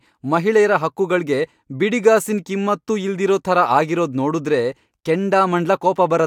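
A speech recording with no technical faults to be heard anywhere in the signal.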